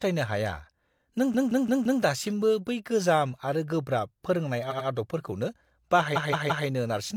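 Repeated frames at 1.30–1.98 s, 4.67–4.84 s and 6.12–6.64 s: a short stretch of coded speech is decoded again and again, so it stutters. A 171 ms block plays four extra times before "दासिमबो बै गोजाम आरो", an 85 ms block plays twice more, and a 171 ms block plays three more times. Each repeat adds its length to the clip.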